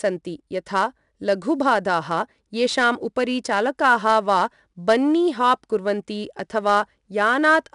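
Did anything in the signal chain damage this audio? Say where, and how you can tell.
Yes: gritty hiss tracks every loud syllable throughout and nothing sounds above 10.7 kHz, the mark of 4-bit ADPCM compression at the codec stage, coding each sample as one adaptive step.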